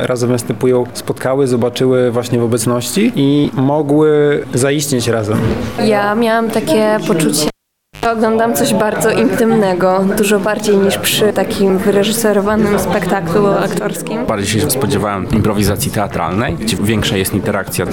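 Cable pulled and plugged in at 7.48 to 8.06 s: a pop, about 0.53 s of near silence, then roughly 95 ms of 50 Hz mains buzz before a second pop restores the sound.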